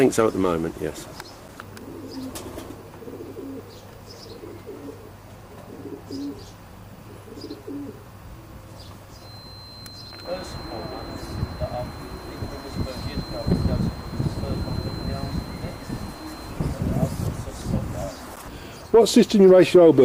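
From 9.13 s to 16.61 s a feedback whistle sits behind the sound: a thin, steady tone at 4.1 kHz, roughly 20 dB below the signal, swelling and fading slowly in level. It likely comes from a loudspeaker-to-microphone loop held just at the edge of feedback, sustaining one frequency without building up.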